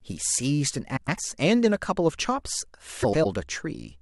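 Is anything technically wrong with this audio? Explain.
Yes. Frames out of order at 0.96–1.19 s and 3.02–3.26 s: two adjacent blocks of about 105 ms each, consistent with four frames apiece, play swapped, giving a garbled flutter.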